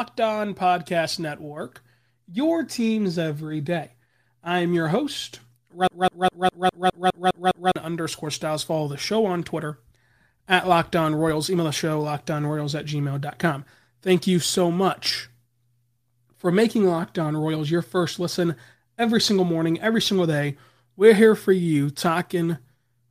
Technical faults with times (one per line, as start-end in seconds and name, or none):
5.87-7.76 broken-record loop